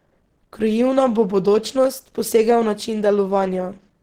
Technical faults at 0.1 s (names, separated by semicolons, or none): Opus compression